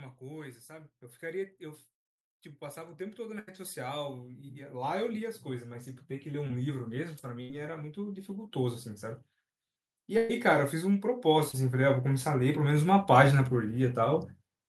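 From 2.58 to 8.93 s the automatic gain rising lifts the level by about 15 dB. The gain control judged the input too quiet and raised it slowly, so speech and background swell together over several seconds rather than jumping, which sets it apart from a sudden level step.

At 3.39 to 3.49 s comes a burst of packet loss: about 80 ms of audio never arrived, and the receiver stretched the last sound into a held, fading buzz or hiss before resuming later in the speech with that stretch gone. Unlike a dropout, the gap is filled, not silent.

At 6.47 to 6.51 s a short concealed packet loss covers about 20 ms. It is much shorter than the bursts, so it registers only as a brief smear or wobble as the filled-in sound blends back.

A second burst of packet loss at 7.41 to 7.51 s again loses about 80 ms.

A second automatic gain rising runs from 10.07 to 14.10 s, a gentler climb of about 7 dB. Inside it, the longest burst of packet loss, at 10.17 to 10.31 s, removes about 120 ms, so the held sound there lasts longer.

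A final short concealed packet loss at 11.51 to 11.55 s removes about 20 ms and leaves another wobble.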